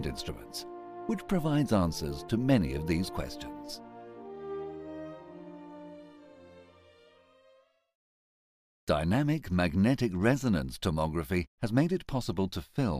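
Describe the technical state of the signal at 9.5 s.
At 9.5 s the signal is intact, with no audible fault at that point.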